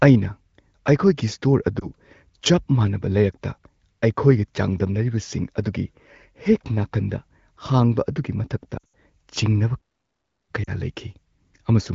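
Speech carried over an AMR wideband (HD Voice) codec with light coding roughness, suggesting a mid-to-high bitrate, is interrupted by lost AMR speech frames at three points. At 1.79 s there is a brief dip lasting about 20 ms, consistent with one dropped frame the decoder concealed by repeating its last pitch and vocal-tract settings. From 8.77 to 8.92 s the losses are scattered across about 160 ms, with the longest gap near 80 ms. That gap drops to near silence within two frames as concealment gain falls, followed by a weak, rough recovery. A third, shorter burst of about 40 ms at 10.64 s follows the stall. From 9.76 to 10.51 s, right after "ꯃꯇꯥꯡꯗ ꯆꯤꯡꯅꯕ", the audio stops dead for about 0.73 s and then resumes. This playback stall is likely the player running out of buffered data or its output thread being blocked.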